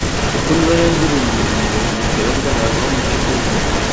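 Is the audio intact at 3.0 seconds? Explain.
No. At 3.0 seconds an echo leak is present, as it is across the whole clip from 0 to 3.92 s. A delayed copy of the speech trails the original by about 0.43 s and sits only a few dB below it. The likely cause is a far-end loudspeaker whose echo canceller failed to strip what its microphone picked up. On a waveform each burst repeats as a slightly weaker shadow, and a spectrogram shows the same harmonic patterns shifted right, all below the 8 kHz ceiling of the call processing.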